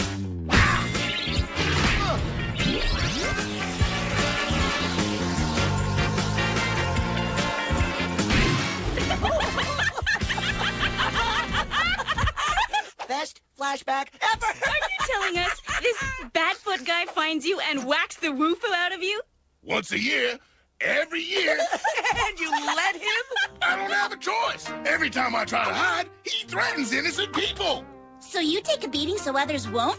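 Nothing stood out on listening; the audio carries the expected character of a G.722 call path at 64 kbps, with no content above 8 kHz.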